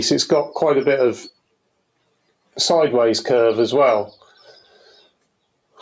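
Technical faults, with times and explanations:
Throughout: noise suppressor applied to music or sounds. A speech-tuned suppressor treats sustained material and tails as noise, so level swings by around 10 dB and the sound pumps.
2.01–2.56 s: sound cut by the noise suppressor. About 0.2 s of steady sound is judged noise and pulled down, dipping by about 18 dB at its deepest.
4.12–5.27 s: sound cut by the noise suppressor. Roughly a second of held or decaying sound sinks, by about 19 dB at worst, as the suppressor clamps it.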